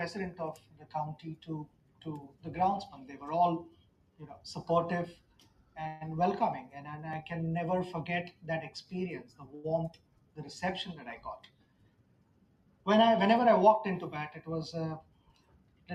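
Noise suppressor applied to music or sounds, throughout: a speech-oriented suppressor keeps treating steady, sustained material as noise, so levels swing by around 20 dB and held sound pumps and thins.

Sound cut by the noise suppressor, at 0.31–2.45 s, 3.67–4.45 s and 5.13–5.77 s: sustained passages and decays sink by up to about 14 dB while sharper onsets pass.

Call audio freeze, at 5.87–6.03 s: the sound is drawn out for 134 ms as a fading continuation with no silence, then resumes where it stopped. This is likely caused by delayed packets draining the jitter buffer.

Repeated buffer, at 7.13 s: a 2.67 ms slice plays twice with a hard join, heard as a click or brief buzz. This fits a 128-sample buffer replayed when fresh audio came late.

Sound cut by the noise suppressor, at 9.24–10.38 s: the suppressor again pulls steady content down by up to about 14 dB.

Short stall from a late packet, at 9.55–9.66 s: within that dip, the sound is held 88 ms too long with a slight buzz or dip while the receiver waits. 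Nothing is lost.

Repeated buffer, at 10.48 s: another 2.67 ms replay gives a second click or brief buzz.

Sound cut by the noise suppressor, at 11.18–12.87 s: sustained parts and tails are pushed down by up to about 14 dB.

Jitter buffer speed-up, at 13.38–14.55 s: to shed built-up delay, the receiver trims pitch-period-sized pieces, about 70 ms in total. Playback runs at 105% speed with unchanged pitch, so the sound feels slightly rushed.

Sound cut by the noise suppressor, at 15.00–15.89 s: the closing sustain and decay are cut by up to about 14 dB.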